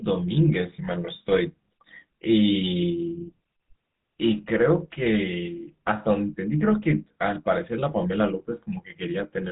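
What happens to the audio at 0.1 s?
At 0.1 s, as throughout the speech, GSM full-rate coding applies: regular-pulse excitation gives a buzzy, gravelly roughness a plain low-pass lacks, and nothing above 3.8 kHz survives, consistent with 13 kbps.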